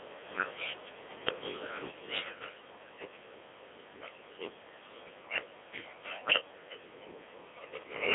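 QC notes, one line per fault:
Throughout: Codec 2 vocoder. The speech comes out robotic and buzzy, because the decoder rebuilds it from sine waves driven by pitch, voicing, energy and a rough spectral envelope rather than keeping the actual waveform. The sound points to a rate around 1.6 kbit/s, and the damage is heavy. The band sits roughly between 300 Hz and 3.5 kHz, with nothing at all above 3.8 kHz, so it has that thin digital-radio character.
1.91 s: sudden gain jump. From this moment to the end, the level drops by about 6 dB in one step, with the speech and the background falling together instead of fading. A drop that abrupt and that uniform likely comes from a digital gain change or a one-bit shift applied without a ramp, so the level just snaps down to a new value and holds there.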